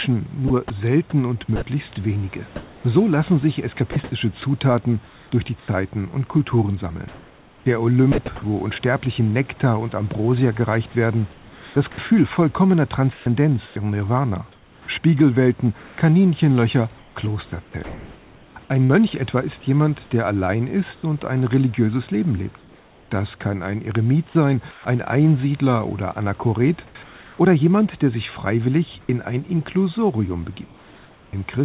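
From 0.48 to 8.18 s, just before "wo unsterblichen", and again from 10.9 to 18.91 s, just before "etwa ist jemand der", the speech turns choppy. Quiet syllables and word edges drop out, about 1.5 s and 2.4 s in total. This is sound chopped by the voice detector, likely from the sender repeatedly toggling transmission and filling gaps with comfort noise.

After "ist jemand der allein", from 20.95 to 24.85 s, and from 26.87 to 31.33 s, the room noise, sitting about 30 dB below the speech, gives way to a flat, featureless noise (roughly 0.7 s and 1.2 s of it) behind a call sound with nothing above 4 kHz. This is comfort noise in place of the background, likely because the sender stopped transmitting during pauses and the receiver synthesised a stand-in.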